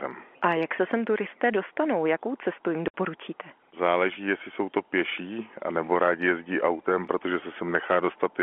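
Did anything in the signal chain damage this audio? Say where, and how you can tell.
Yes, at the network stage: packet loss filled with silence cuts a hard 60 ms hole from 2.88 to 2.94 s, which fits three 20 ms packets. On a waveform it is a flat line, and on a spectrogram it is a blank column with abrupt edges across the telephone band.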